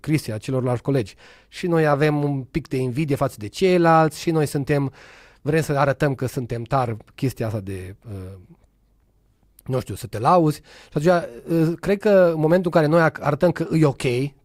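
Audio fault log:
13.65–13.68 s, corrupt frame decoded: a brief glitch of about 22 ms, near the end of the speech, lasting roughly one compressed frame. Flipped bits in that frame reached the decoder, which played it anyway, so misread gains or codes placed energy at frequencies unrelated to the surrounding signal. The result is a short, out-of-place burst of misplaced sound. Its error energy peaks somewhere around -35 dBFS.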